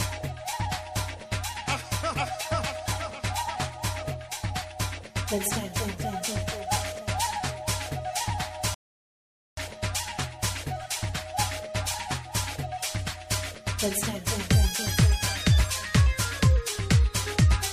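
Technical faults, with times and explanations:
8.74 to 9.57 s, rebuffering stall: the player used up all the audio it had downloaded and had to wait for more data before it could carry on. Playback stops dead and the sound drops to silence for about 830 ms, then picks up at exactly the point where it broke off. Nothing is skipped or repeated; the gap simply inserts extra time, so everything after 9.57 s arrives late.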